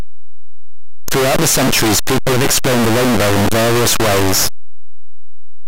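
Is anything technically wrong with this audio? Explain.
Yes. A signed and unsigned mix-up runs throughout the speech: very loud, harsh distortion where quiet passages are as loud as the rest. The likely cause is 8-bit samples read with the wrong sign convention, flipping the top bit so each zero crossing jumps across the full range.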